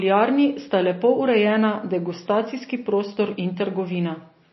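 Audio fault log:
Throughout, MP3 compression: the speech stops dead above 5.8 kHz and carries a plainly audible watery swirl as weak frequency lines flicker between frames, likely from a bit-starved MP3 encoder near 24 kbps. A plain low-pass filter would not swirl like this.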